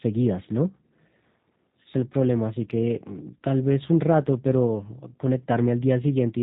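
From start to finish, the speech carries G.729 codec damage, and it is plainly audible. Nothing above 4 kHz survives. Voices sound thin, slightly rough and synthetic, rebuilt from a filter and sparse pulses. The texture fits an 8 kbit/s VoIP link.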